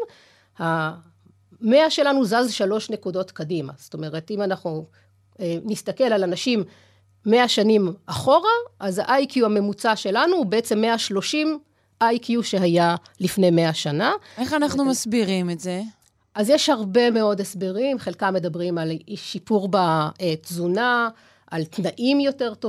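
No technical faults can be heard in this speech recording.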